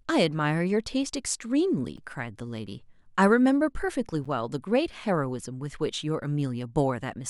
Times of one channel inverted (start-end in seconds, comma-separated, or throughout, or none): none